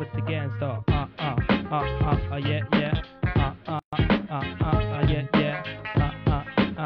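There's a gap at a join of encoded pieces right around 3.79 s, where the sound just drops out for roughly 133 ms and picks up again at 3.93 s exactly where it left off. The edges are smeared by the codec. It sounds like two separately encoded chunks were butted together untrimmed, so the encoder's start-up delay and last-frame padding both stayed in and left that hole in otherwise continuous audio.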